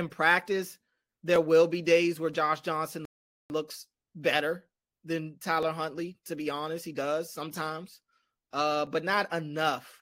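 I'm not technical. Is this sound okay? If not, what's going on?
No. The speech has two kinds of trouble.

At 3.05 s the audio simply stops, goes silent until 3.5 s, and then carries on with "looks better than" exactly where it left off. This is a rebuffering stall. The player ran out of downloaded audio and paused until more arrived, adding about 0.45 s of silence. Unlike a dropout, nothing is missing. The speech is just held up and then resumes intact.

At 1.36 s, 5.63 s (just after "looks better than") and 8.87 s (just after "he does sometimes uh") there is a single sharp click. These are likely dropped samples, a tiny sliver of the recording under a millisecond long skipped over, so the sound jumps abruptly. Unlike the stall, there is no gap and no delay, only a brief tick.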